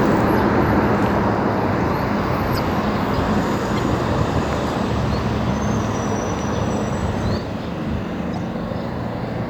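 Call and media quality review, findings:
Corrupt frame decoded, 2.54–2.59 s: loud chirp/noise burst, peaking around -5 dBFS, spanning a couple of codec frames. Decoder played damaged frames with misread gains and codes, so energy landed at wrong frequencies. Unlike a click, it has spectral content and lasts a frame length.

Corrupt frame decoded, 3.76–3.79 s: shorter, quieter blip, roughly one frame. Same decoder mechanism at lower error level. Unlike a dropout, there is added energy.

Corrupt frame decoded, 8.34–8.38 s: squeak across a few short frames, moderate level, landing inside the doubled section.

Channel delay (doubling), 7.38 s to end: every event heard twice, the second copy 40 ms later at equal level. One channel's path is held back by a long buffer, then both channels are summed to mono. Unlike reverb, there is a single discrete slap with no decaying tail. Unlike comb filtering from a short offset, 40 ms is long enough to hear as a separate repeat rather than a tonal colouring.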